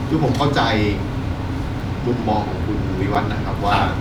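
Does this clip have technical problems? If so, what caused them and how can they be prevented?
Yes. Two blocks of digital silence are audible: a tick at 1.8 s from a gap under 1 ms, and a short pop-like tick at 3.15 s lasting about 7 ms, where the sound cuts out abruptly. This points to an output buffer that wasn't filled in time. Prevent it by using larger buffers or giving the audio thread higher priority.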